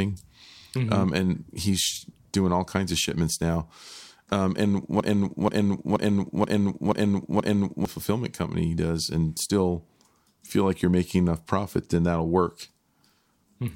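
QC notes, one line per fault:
5.00–7.85 s, broken-record loop: a 0.48 s fragment repeats six times back to back, likely a stalled stream resending its last chunk, losing the audio before "fulfillment company does and".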